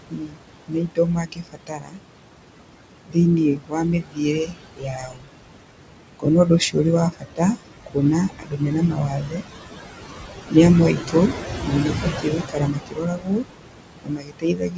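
Speech with room noise that pumps down between phrases and back up beneath them: noise suppressor artifacts, from frame-by-frame attenuation that cuts the noise by about 21 dB. Speech cut by the noise suppressor makes soft parts sound swallowed and faint at 0 to 2.01 s, 3.06 to 5.29 s, 6.19 to 9.43 s, 10.51 to 13.46 s, and 14.04 s to the end, with drops of about 18 to 22 dB, because the suppressor mistook stretches of speech for noise. The steady room noise sits about 7 dB under the speech, and nothing is heard above 8 kHz, which fits a G.722 call codec.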